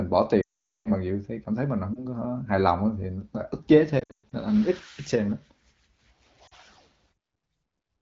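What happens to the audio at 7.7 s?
Nothing goes wrong at 7.7 s: the speech carries on intact there, with only the light, band-limited character of the AMR wideband (HD Voice) codec at 12.65 kbit/s.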